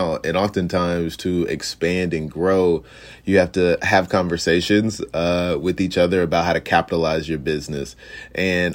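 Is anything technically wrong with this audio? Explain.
No, nothing technically wrong can be heard here.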